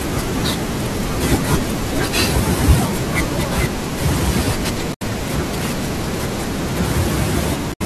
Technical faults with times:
4.90-5.02 damaged data in a compressed stream
7.69-7.82 damaged data in a compressed stream

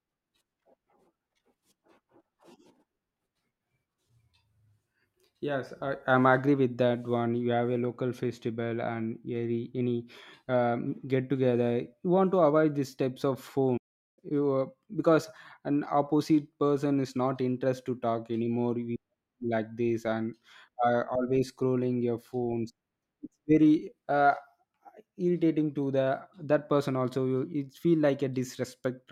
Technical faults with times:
13.77-14.19 playback stall

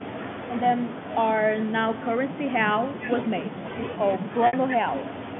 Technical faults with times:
4.47-4.53 packet loss with pitch repetition

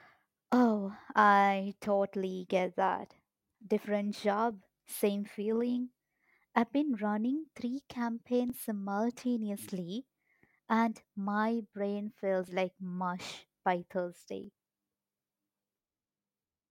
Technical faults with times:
0.53-0.55 overlap between stream segments
4.51-4.53 overlap between stream segments
8.50-8.52 overlap between stream segments
12.48 overlap between stream segments
14.44 overlap between stream segments

